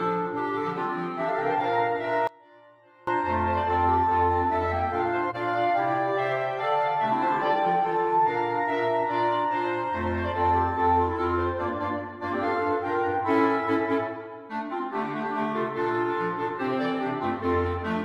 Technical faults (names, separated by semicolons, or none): one channel inverted; corrupt frame decoded